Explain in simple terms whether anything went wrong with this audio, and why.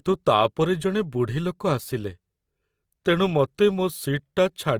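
Throughout the speech, the sound has a rough, grainy, hissy texture, likely from Opus compression. To save space, the encoder keeps the overall loudness of each pitch range but fills in fine detail with noise. Unlike MP3 damage, there is less watery swirl, and the treble stays present, just coarse.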